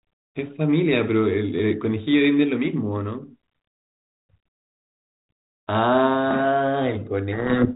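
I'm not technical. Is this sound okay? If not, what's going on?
No. From 7.32 s to the end, the speech disappears under harsh distortion. This is a codec payload misread: the receiving side reads the G.726 code words with their bits in the wrong order.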